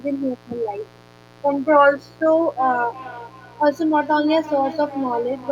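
A steady, raspy buzz sits under the whole of this speech recording, well below the voice at something like 25 dB down but never letting up. It is mains buzz on a 60 Hz supply: sharp switching spikes from a dimmer, rectifier or unshielded cable get into the signal twice per mains cycle, so the hum carries a dense ladder of 60 Hz harmonics climbing into the kilohertz range, which gives it that rasp rather than a pure low tone. From 2.58 s to the end of the clip, the speech also comes back at a fixed delay of roughly a third of a second, a thinner, ringing copy trailing each syllable, at its loudest about 14 dB below the direct speech. This is feedback echo between two devices: two devices in the same room are joined to one call, one plays what the other's microphone sent, and that microphone picks it up again. Each device's echo canceller removes only its own playback, so the repeat passes through.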